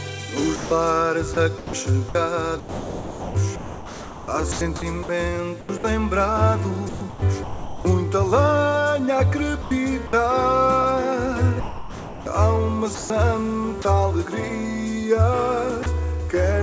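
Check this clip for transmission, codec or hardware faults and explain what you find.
Two voice-detector faults are present, both at the sending end of a G.722 call path whose audio stops at about 8 kHz.

Sound chopped by the voice detector, at 0.56–5.84 s, 6.89–7.85 s, 9.62–10.13 s and 11.60–13.85 s: the sender's voice detector likely kept switching transmission on and off. Comfort noise filled about 2.2 s, 0.66 s, 0.15 s and 0.84 s of these stretches, so the sound turns choppy.

Sound dropped by the voice detector, at 15.83–15.86 s: the detector likely took a quiet part of the sound for background and stopped sending. For about 30 ms, steady comfort noise replaces the sound before it returns.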